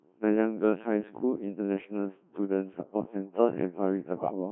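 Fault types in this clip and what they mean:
Codec 2 vocoder: The whole clip is resynthesised speech, confined to about 150 Hz to 3.4 kHz, with the heavy buzzy, robotic character of a very low-rate vocoder, which fits Codec 2 at around 1.3 kbit/s. Only pitch, voicing, energy and a coarse spectral envelope survive, and the decoder rebuilds the voice from sine waves. Unlike a waveform codec starved of bits, which smears and swirls the original sound, this replaces the sound with a synthetic imitation.
bit errors on digital voice radio: From 4.16 to 4.32 s the synthetic voice suddenly lurches in pitch, level and tone colour, breaking into warbly, bleepy gibberish over a few vocoder frames, which fits a bit error rate of around 5 percent. Each flipped bit corrupts a parameter that governs a whole frame. Unlike packet loss, which leaves gaps, silence or smoothed repeats, the sound keeps going but becomes wrong.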